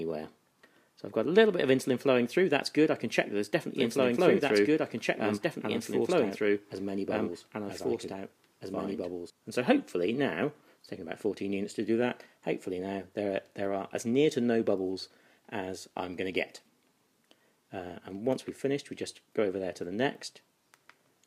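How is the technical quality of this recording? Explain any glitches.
The recording has one clear fault. From 3.76 to 9.3 s there is a doubled audio track: a second, equally loud copy trails about two seconds behind, likely from a duplicated capture path. It shows as repeated waveform and spectrogram patterns, starting and ending abruptly.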